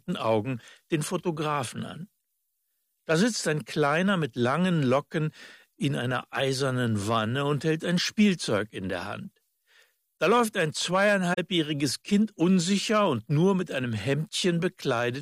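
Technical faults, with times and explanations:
11.33 to 11.39 s, AAC frame loss with muting: the sound briefly thins away and returns, leaving a soft-edged gap of about 43 ms. That length fits roughly two lost frames. The decoder filled the missing frames with zeroed spectrum, so nothing was synthesised there, and the overlapping transform windows of the neighbouring good frames taper the sound down into the hole and back up out of it, rounding both edges.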